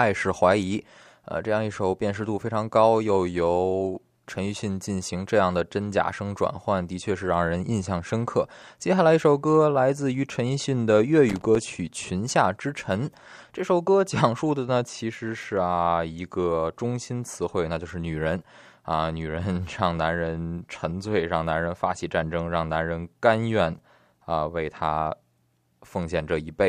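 At 11.29 s to 11.56 s the speech is broken up by loose connector crackle: a worn or dirty contact keeps making and breaking, chopping the signal into an irregular scratchy burst. Unlike a single digital click, it is a ragged cluster lasting about a quarter second.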